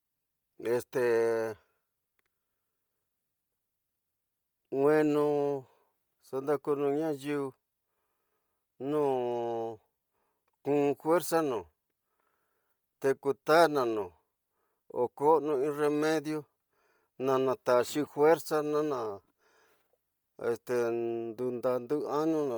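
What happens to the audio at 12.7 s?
The speech at 12.7 s is passing through what is likely Bluetooth LC3 compression, which runs from the start of the clip to the end. The encoder is starved of bits, which fits a rate near 32 kbps on 10 ms frames. It zeroes much of the upper spectrum and fills the gaps with synthetic noise, so the speech takes on a heavy breathy, grainy edge, and nothing sits above about 20.2 kHz.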